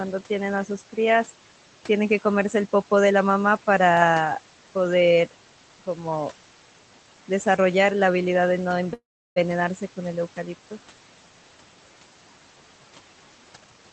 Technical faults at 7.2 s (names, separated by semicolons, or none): noise suppressor artifacts